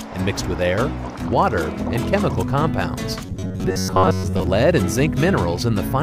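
Robotic sound from repeated short buffers, 3.26 to 4.47 s: a rigid, metallic 93.8 Hz buzz, likely from a 10.7 ms chunk replayed across most of that stretch.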